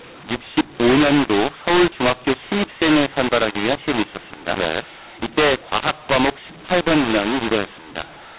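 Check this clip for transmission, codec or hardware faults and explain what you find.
One fault runs through the whole speech clip: mu-law and A-law mixed up. The G.711 A-law telephone coding, band-limited below 4 kHz, carries it. Samples written as A-law are read as mu-law, so levels scramble. Speech turns harsh and distorted, and pauses fill with noise.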